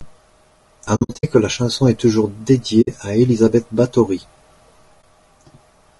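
Across the whole speech clip the voice is rough and grainy, with a noisy haze between the harmonics and an upper band that sounds thinned and somewhat synthetic. This is likely low-delay AAC compression of the AAC-ELD kind used for video calls, at a rate that fits about 32 kbps. At that low bitrate too few bits reach the spectrum, so noise fills the gaps between the harmonics. That steady texture, present everywhere, sets it apart from the separate short holes described below.

AAC frame loss with muting appears first between 0.95 and 1.25 s, as a cluster of holes spread over about 0.28 s, the longest run roughly 70 ms. A 60 ms gap follows at 2.81 to 2.88 s, and a brief hole at 5.01 s. Each time, the decoder zeroed the missing frames, and the overlapping windows fade the sound down and back up. That soft-edged silence distinguishes it from hard-cut dropouts or from concealment that repeats the previous sound.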